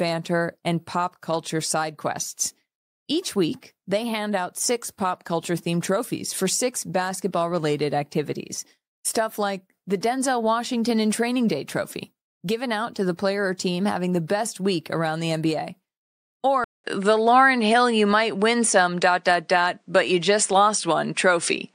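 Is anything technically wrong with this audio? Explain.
Yes. Input switched to a poorer device at 16.64 s: the recording likely moved to another microphone with a narrower band, nothing above 9.8 kHz. After a 200 ms gap, the speech sounds duller to the end, shifts in level by around 5 dB, and gains a faint new noise floor.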